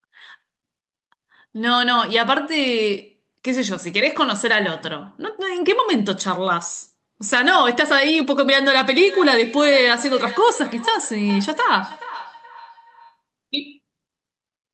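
From 9.01 to 13.21 s comes feedback echo between two devices: another device in the room replays the call into a microphone whose echo canceller ignores it. Speech returns roughly every 0.4 s, about 15 dB down, thinner and ringier each pass, unlike reverb's smooth tail.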